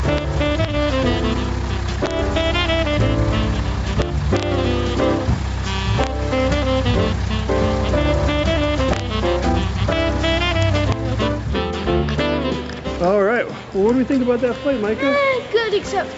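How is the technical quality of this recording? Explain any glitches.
The recording has two audible faults: a level that breathes up and down throughout, and several sharp cracks where loud peaks wrap around. The top end stops at 8 kHz, as expected from a call path.

Gain pumping runs the whole clip. The level swings by roughly 10 dB, pulled down on each loud sound. The likely cause is input gain set far too high, with a fast limiter clamping down on every peak. Loud and soft parts end up closer in level, and the sound is squashed.

Integer overflow produces harsh cracks at 0.18 s, 0.65 s, 2.06–2.11 s, 4.02–4.43 s, 6.04–6.07 s, 8.93–9.00 s and 10.63–10.92 s. Peaks exceeded the integer limit by about 1 dB (about 2 dB at 4.02 s) and wrapped to the opposite sign. This gives violent snaps rather than the flattened buzz of clipping.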